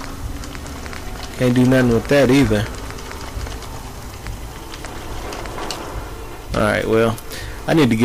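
A harsh, fuzzy distortion sits on the loud parts from 1.42 to 2.60 s, returns more mildly from 6.57 to 7.09 s, and again from 7.69 s to the end. This is hard clipping: peaks overdriven by about 12, 7 and 12 dB are cut flat, adding high harmonics.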